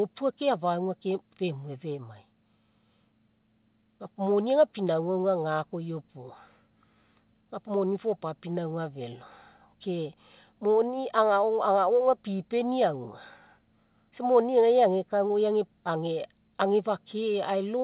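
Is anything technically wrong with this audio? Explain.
No, the signal shows no technical problem: the speech comes through a call path that uses G.711 mu-law at 64 kbps, which carries nothing above 4 kHz and gives it the narrowband character of an ordinary telephone line.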